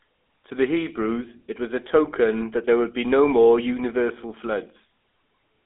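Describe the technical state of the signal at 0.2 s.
At 0.2 s the speech carries GSM full-rate codec damage that runs through the whole clip. The codec rebuilds the voice from a vocal-tract model driven by sparse, regular pulses, leaving a plainly buzzy, gravelly roughness. A spectrogram shows energy confined to 250 Hz–3.5 kHz and nothing above 3.8 kHz.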